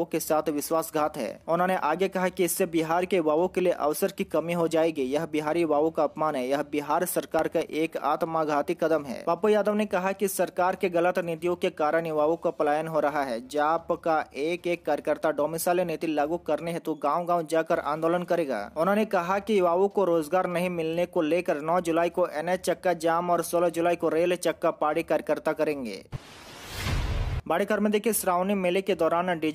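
Processor overload crackle runs from 7.39 to 7.97 s. The processor falls behind and misses a handful of very short buffer deadlines, each near a millisecond. Every miss drops in a brief hard-edged silence, so the sound picks up a gritty crackle that stops once the load clears.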